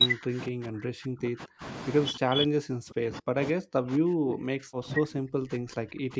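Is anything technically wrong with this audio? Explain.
Yes. From 0.0 to 1.63 s and again from 2.11 s to the end, the speech is pushed down hard, at its deepest by roughly 40 dB, so it dips and breaks up in fragments. This is most likely speech suppressed in double talk: with both sides talking, the echo canceller mistook this talker for loudspeaker echo and attenuated it. The waveform shows collapsed, gappy envelopes in both spans. The spectrogram shows faint, broken harmonics below the call processing's 8 kHz ceiling.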